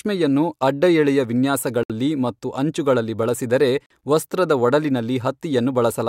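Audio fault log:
1.83–1.92 s and 3.86–3.91 s, Bluetooth dropout: the speech cuts to silence for about 64 ms just before "ಮತ್ತು ಅಂಚುಗಳಲ್ಲಿ ಬಳಸಿದರೆ ವಸ್ತ್ರದ", then for about 43 ms right after "ಮತ್ತು ಅಂಚುಗಳಲ್ಲಿ ಬಳಸಿದರೆ". Both gaps fit audio packets likely arriving late and being discarded. Playback resumes further along, as if the speech had continued unheard. On the waveform these are flat gaps, and on the spectrogram they are empty vertical stripes across all frequencies.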